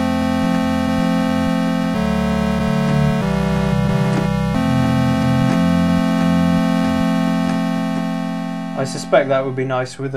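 No technical faults are audible.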